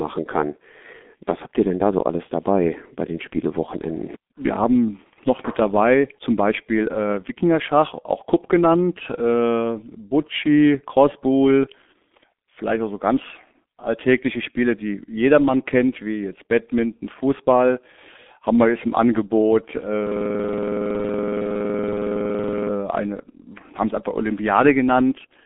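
Speech, carried through the G.723.1 codec for its whole length with heavy damage: it sounds muffled and hoarse with smeared consonants, which fits a 6.3 kbit/s stream with coarse 30 ms frames. A spectrogram shows nothing above 3.7 kHz. From 20.07 to 22.69 s a system hang loop repeats one 46.44 ms fragment about 56 times at 21.5 Hz, which fits a 2048-sample buffer. The fault comes from a frozen system while the hardware keeps replaying its ring buffer. The waveform shows identical blocks tiling that span.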